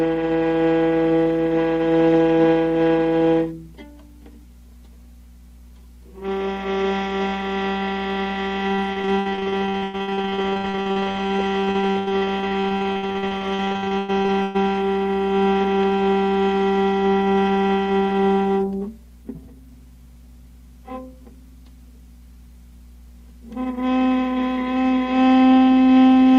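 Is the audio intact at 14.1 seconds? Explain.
No. At 14.1 s the audio sits inside a stretch of repeated packet loss (robotic sound) running from 8.75 s to 14.56 s. Dozens of short dropouts, the longest 120 ms, are each patched by extending the last received sound, and another hole arrives almost at once. About 37% of that span is filled this way, so the sound there is choppy, with pieces missing.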